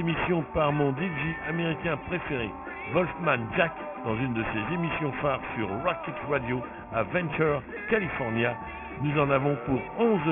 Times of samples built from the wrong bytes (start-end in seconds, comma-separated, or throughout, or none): none